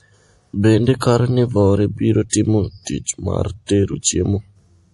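The speech was likely encoded as low-bitrate MP3 and then saved again at a high bitrate, so nothing above about 11.5 kHz survives throughout the clip.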